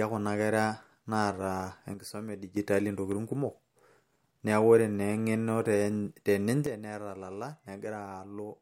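At 1.94 s the speech and its background noise drop together by about 8 dB in an instant, then snap back up at 2.57 s. At 6.66 s the same abrupt step recurs, about 10 dB down this time, and the level stays low to the end. Each is a sudden gain jump, likely a digital gain change applied from one sample to the next with no ramp to smooth the transition.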